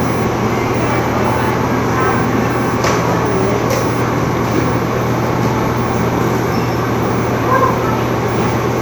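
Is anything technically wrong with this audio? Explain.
No, nothing technically wrong stood out on listening to these sounds.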